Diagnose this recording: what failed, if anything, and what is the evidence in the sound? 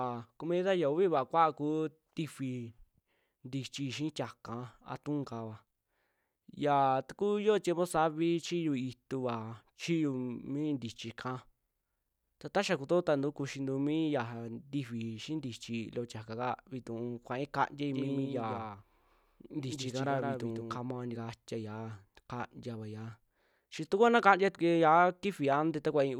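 Doubled audio track, 17.9 to 20.78 s: a dry copy of the speech trails by roughly 150 ms, about 5 dB quieter, likely from a slower second capture path.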